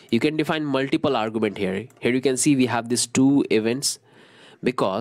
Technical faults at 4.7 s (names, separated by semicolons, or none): none